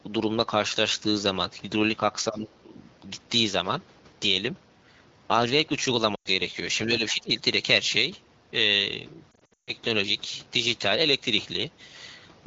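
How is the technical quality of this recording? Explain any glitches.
The recording has two kinds of glitch, each occurring twice, on a wideband phone call whose 12.65 kbit/s coding keeps the speech clear.

Speech suppressed in double talk: from 2.29 to 2.75 s and from 6.86 to 7.3 s, the voice dips by about 10 dB and then about 15 dB. This is likely the echo canceller mistaking the talker for loudspeaker echo while both sides spoke. The level is turned down rather than smeared, which sets it apart from frame loss.

Lost AMR speech frames: at 6.15 to 6.29 s, 100 ms drops out, which fits about five frames. From 9.31 to 9.72 s, 260 ms is lost in patches, with the longest run 140 ms. The decoder reuses the last good sound and fades it, dropping to near silence within two frames rather than giving a clean level dip.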